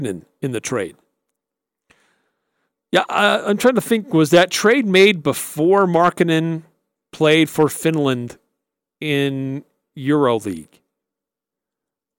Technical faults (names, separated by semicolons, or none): none